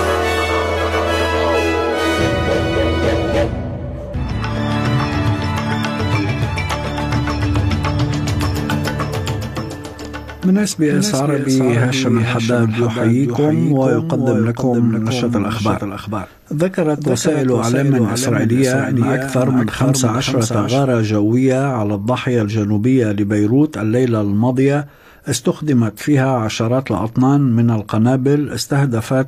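From 10.9 to 20.8 s a doubled audio track appears: an undecayed, full-band copy trails about half a second behind, around 5 dB quieter, likely from a second capture path, unlike reverb.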